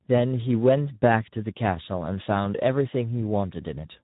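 From start to end the speech carries Speex codec damage: a hoarse, noisy graininess from an excitation starved of bits, consistent with roughly 11 kbps, and nothing above 3.8 kHz. Unlike a plain band limit, the remaining band itself sounds rough and noisy.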